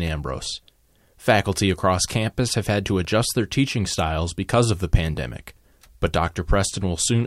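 Nothing goes wrong anywhere in this speech recording; there's simply no technical fault to point to.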